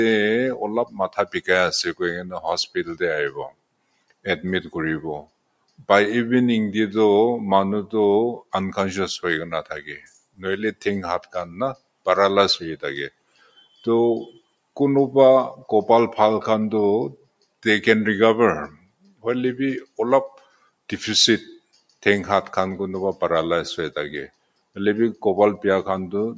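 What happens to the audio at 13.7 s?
Right there the sound is cut by the noise suppressor. Between 13.1 and 14.77 s it mistakes the audio for noise and pulls it down by up to about 21 dB, roughly a second in all. The noise suppressor applied to music or sounds is also running all along, treating steady material as noise and swinging the level by around 10 dB, so held sounds and tails sink while attacks get through.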